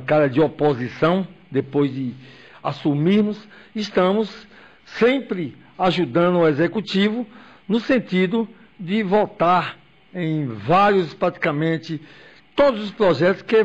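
No faults are audible anywhere in the clip.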